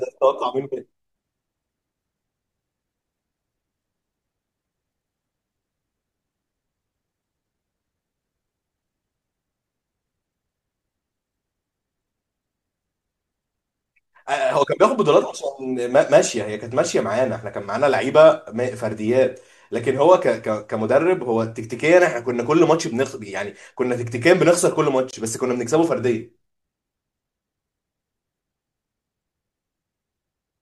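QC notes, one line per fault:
25.11–25.15 s, Bluetooth dropout: the speech cuts to silence for about 38 ms, then resumes further along rather than where it stopped, unlike an edit or buffer stall. This likely reflects one wireless audio frame of about 21 ms that never arrived.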